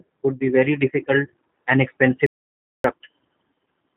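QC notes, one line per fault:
Throughout, G.729 codec: speech is rebuilt from a vocal tract filter, a pitch predictor and a few pulses per frame, in a way that fits an 8 kbit/s G.729A stream. Nothing above 4 kHz survives, and the voice has a plainly audible rough, synthetic edge.
2.26 to 2.84 s, playback stall: after "be very difficult and", output goes silent for about 0.58 s, most likely because the player ran dry of data or its thread was blocked. The speech stops in mid-flow and resumes only after that gap.
3.00 s, VoIP packet loss concealed by the speech codec: about 20 ms of audio went missing, consistent with two lost frames. The decoder filled the hole by extending its last pitch and filter, leaving a brief fading smear of buzzy tone or coloured noise and weakened speech just after.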